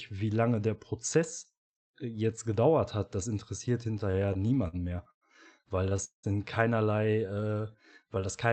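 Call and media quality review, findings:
Speech stutters and drags at 3.91–5.24 s, right after "gedauert hat das interessiert". There are 13 short stalls, the longest about 0.1 s, with the last sound held over about a fifth of the span. Repeated stalls (stutter) come from the jitter buffer running dry on late packets, and the receiver conceals the gaps. No content is lost.

Heavier stutter at 5.69–6.26 s, just before "in keinerlei": 5 stalls, the longest 0.19 s, with fading fills covering about 42% of the span. It is the same jitter-buffer underrun mechanism, with late arrival and concealment, and nothing is dropped.

Drawn-out speech at the same pitch at 7.27–7.69 s, after "in keinerlei", running at about 86% speed with 67 ms added. This is a jitter buffer slow-down: the buffer repeats single pitch periods to rebuild its reserve. It sits on a call path whose upper band ends near 8 kHz, which fits an Opus-type codec.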